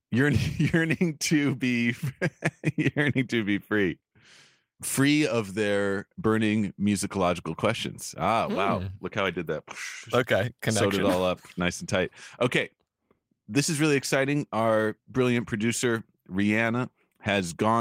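No technical faults are audible.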